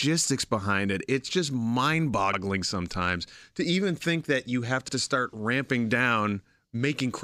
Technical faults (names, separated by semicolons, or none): overlapping chunks